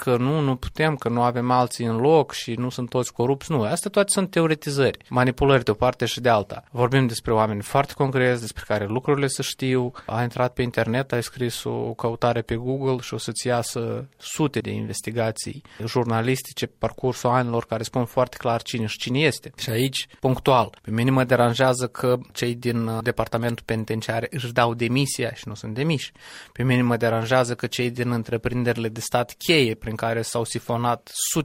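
Pre-echo at 12.47 s and 20.44 s: hiss rising about 15 dB, then about 12 dB, smears 17 ms ahead of each sharp attack. Noise sized for the loud onset fills the whole transform block, which fits a 26 ms window never switched to short blocks.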